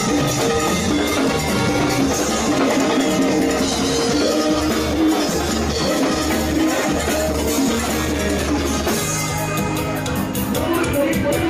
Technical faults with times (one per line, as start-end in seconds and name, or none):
none